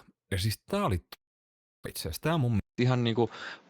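From 1.13 to 1.88 s the stream most likely suffered a long network dropout: packets stopped arriving, and the receiver had to bridge the gap itself. The last sound is stretched into a fading buzz, which gives way to near-silence for most of that span. About 0.6 s of speech is never played. The audio resumes at "itse asiassa" with its timing shifted by roughly a tenth of a second, so the speech jumps forward.

At 2.60 s the input appears to be switched to a poorer device, with the system likely moving to a different, narrower-band microphone or headset path mid-recording. There is a short gap of about 0.19 s at the switch. From there to the end, nothing reaches above 7.4 kHz, so the speech turns duller and boxier. The level shifts by about 5 dB, and a new background noise sits about 35 dB below the speech.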